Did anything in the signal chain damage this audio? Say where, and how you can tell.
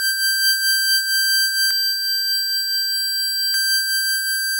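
Yes. From about 1.71 s to 3.54 s the music turns rough and slightly doubled, with a fixed, evenly spaced series of notches carved through the spectrum, beginning down near 30 Hz. This is channel delay (comb filtering). One channel is running roughly 20 ms behind the other, and when the two are summed to mono, whatever they share cancels at regular frequency intervals. That points to a buffer or routing stage holding one side back, then the mixdown.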